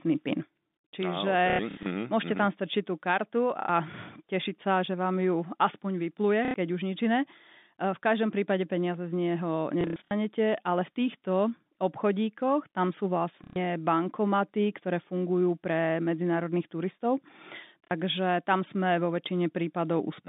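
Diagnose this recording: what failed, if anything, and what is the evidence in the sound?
Packet loss with last packet repeated at 1.5, 3.6, 6.45, 9.81, 13.44 and 17.85 s: network packets dropped, the receiver replayed the previous one, giving robotic stutters.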